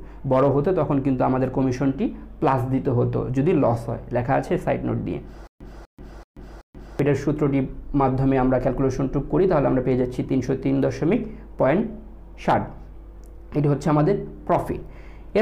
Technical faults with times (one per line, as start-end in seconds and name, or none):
5.47-6.99 stutter with silent gaps